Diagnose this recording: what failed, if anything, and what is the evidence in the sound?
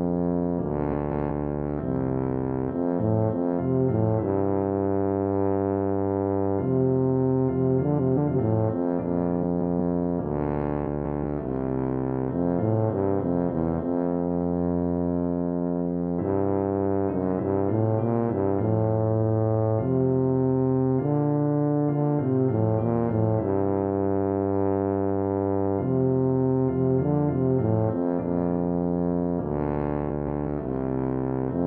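Frames out of order at the network or codec stage, at 0.92–1.31, 7.97–8.35, 9.42–9.77, 10.86–11.25 and 30.08–30.47 s. Two adjacent 186 ms blocks play swapped, giving a garbled flutter. A spectrogram shows vertical breaks there, and no time is lost.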